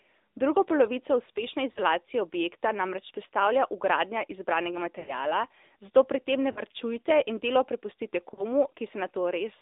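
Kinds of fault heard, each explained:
AMR narrowband mobile codec: The speech was squeezed through a narrowband mobile speech coder that rebuilds the voice from a vocal-tract model and a few excitation pulses per frame. Its damage is plainly audible throughout. The line carries only about 250 Hz to 3.7 kHz, so the voice is thin and boxy, and the coarse pulse excitation gives it a buzzy, synthetic edge. The degree of artefacting fits a mid-rate mode around 10.2 kbps.
Loud pop: A sudden electrical step or spike, likely from a plug, switch, static discharge or driver glitch, was added on top of the signal. At 0.70 s a single sharp pop lasting just under 30 ms jumps out at roughly 10 dB above the surrounding speech. The audio carries on underneath it without interruption, so the pop sits over the sound rather than replacing it.
Lost AMR speech frames: Corrupted radio frames failed their checks, so the decoder filled the gaps by reusing its last good pitch and vocal-tract settings at falling gain. 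Four such dropouts occur: 1.72 to 1.80 s, just before "objekta namreč", then 6.52 to 6.61 s and 8.34 to 8.44 s, each about 40 ms long and consistent with two missing 20 ms frames. The longest, 5.00 to 5.14 s, loses about 80 ms. Each is heard as a smeared, warbling dip before the voice returns.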